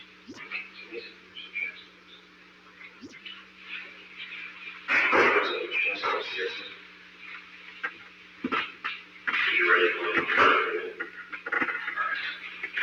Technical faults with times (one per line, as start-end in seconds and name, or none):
0.00-12.82 noise suppressor applied to music or sounds
0.04-0.28 sound cut by the noise suppressor
1.10-1.35 sound cut by the noise suppressor
1.83-3.01 sound cut by the noise suppressor
3.42-3.62 sound cut by the noise suppressor
3.96-4.18 sound cut by the noise suppressor
4.51-4.88 sound cut by the noise suppressor
6.69-9.22 sound cut by the noise suppressor